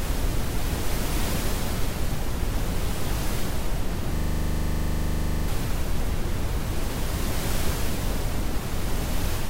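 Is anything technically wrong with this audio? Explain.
Yes. From 4.16 to 5.48 s there is a system hang loop: the system froze while the sound hardware kept replaying its ring buffer. A 40 ms slice repeats exactly, about 33 times, producing a rattling 25 Hz buzz, and about one and a half seconds of real audio never plays.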